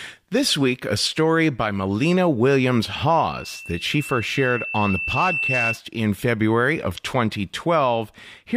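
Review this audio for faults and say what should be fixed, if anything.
From 3.17 s to 5.80 s there's loudspeaker feedback squeal, a single tone at 2.7 kHz that swells over about two seconds until it's roughly as loud as the speech. The mic is picking up its own speaker, and at that frequency the loop gain tops one. Pull the mic back from the speaker or notch 2.7 kHz.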